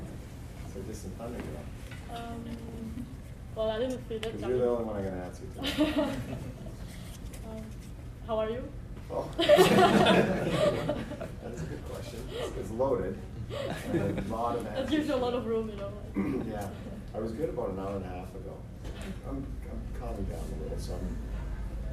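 No technical faults can be heard anywhere in the audio.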